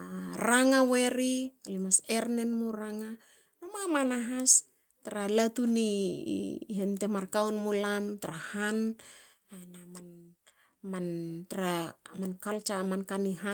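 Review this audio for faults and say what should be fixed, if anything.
Nothing in this speech recording needs fixing, as no technical faults can be heard anywhere in it. No change to the recording or playback chain is called for.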